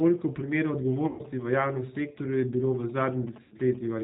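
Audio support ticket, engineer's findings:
G.729 codec, whole clip, 0 to 4 s. Speech band-limited with nothing above 4 kHz, slightly rough and synthetic, with plainly audible codec damage. Probable component: VoIP leg encoding at 8 kbit/s, consistent with G.729A. Mechanism: each 10 ms frame is rebuilt from a vocal tract filter, a pitch predictor and a few pulses, so fine waveform detail and high-frequency content are lost.

GSM signalling bursts, 0.92 to 3.85 s. Galloping dit-dit-dit of short buzzes at a 217 Hz repetition rate, roughly 20 dB under the speech. Probable component: a nearby 2G handset in signalling state, with its RF picked up by the audio circuit. Mechanism: the circuit rectifies the intermittent radio bursts, turning the transmit envelope into audible buzz.

VoIP packet loss concealed by the speech codec, 1.07 to 1.23 s and 3.42 to 3.55 s. Speech smears into a buzzy tone or coloured noise that fades, then stays weak and distorted briefly after it resumes. 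Gaps of about 120 ms and 90 ms fit runs of 30 ms packets lost in transit. Mechanism: the decoder extrapolates from the last pitch and filter with decaying gain, and recovery lags because each frame builds on the previous one.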